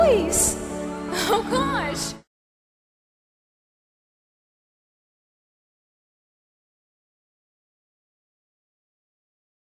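No technical faults are audible.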